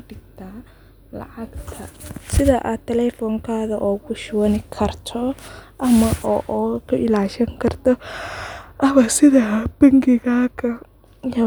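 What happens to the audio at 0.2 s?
Nothing goes wrong at 0.2 s; the speech plays through that moment intact, with no dropout, click or distortion.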